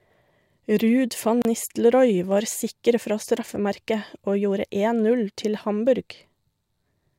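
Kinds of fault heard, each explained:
Gap at a join of encoded pieces: at 1.42 s speech stops for 31 ms, then resumes; separately encoded segments kept their encoder padding silence.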